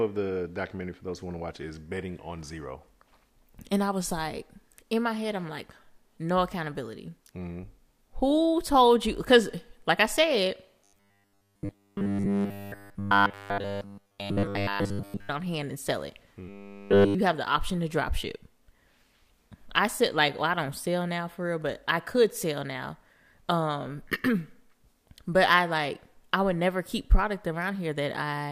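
From 10.84 to 15.3 s, after "like I said" and before "on hand and sell", the speech collapses into a rigid, metallic buzz pitched at 100 Hz, with the words only roughly traceable. It returns from 16.49 to 17.15 s, between "hand and sell it" and "have the option to". This robotic sound from repeated short buffers likely comes from audio arriving too seldom, so a 10 ms slice was looped throughout while the real signal was skipped.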